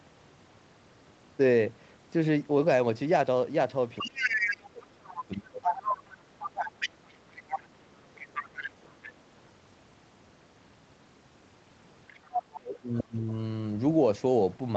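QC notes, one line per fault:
4.0–5.24 s, 5.63–6.0 s, 6.39–7.67 s, 8.15–9.13 s and 12.08–13.03 s: other side's voice leaking through. A second voice sits under the main speech in five stretches. It runs about 5 dB below the talker in the first and third, roughly level with it at 5.63 s, and fainter later, about 15 dB down at 8.15 s and 10 dB down at 12.08 s. This is likely far-end audio from the talker's loudspeaker that the echo canceller left in the microphone signal.
4.01–6.3 s, 7.71–8.04 s and 12.77–13.34 s: speech suppressed in double talk. The talker's speech dips sharply while the far side is playing on the loudspeaker, by about 20 dB in the first two spans and about 25 dB in the last. The first span is the longest, around two seconds. The cause is likely the echo canceller, which cannot separate the near talker from the echo when both are active and turns both down together.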